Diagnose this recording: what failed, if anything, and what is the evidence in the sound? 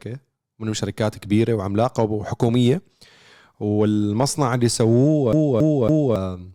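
The CD is stuck on one turn, a storage and playback fault. From 5.32 to 6.16 s, a 278 ms stretch of speech repeats three times, each jump briefly muted.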